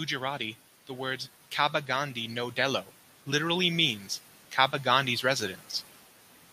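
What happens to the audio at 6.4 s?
Nothing goes wrong at 6.4 s: the audio plays through that moment cleanly, with no dropout, click or other fault.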